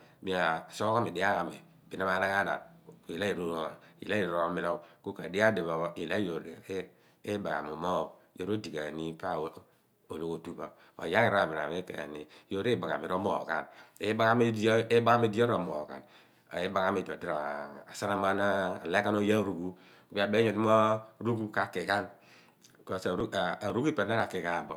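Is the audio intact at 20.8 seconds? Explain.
Yes, the speech at 20.8 seconds is intact, with no audible fault at that moment.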